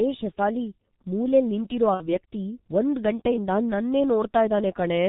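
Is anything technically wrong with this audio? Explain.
Yes. There are two faults.

The whole clip carries heavy G.723.1 codec damage. The speech sounds muffled and hoarse, which fits this low-rate telephony codec at about 6.3 kbit/s. Nothing above 4 kHz survives. The coarse, slowly updated voice model blurs the consonants.

From 1.94 to 2.11 s, after "ಶೆಫಾಲಿ ಮೂಲೆಲ್ ನಿಂತಿರೋ" and before "ವ್ಯಕ್ತಿ ಒಂದ್ ಗಂಟೆಯಿಂದ ನನ್ನೇ", there is VoIP packet loss concealed by the speech codec. About 60 ms of audio is missing, which fits two lost 30 ms frames. The decoder stretches the last sound into a buzzy tone or coloured noise that fades. The speech stays weak or distorted briefly after packets return.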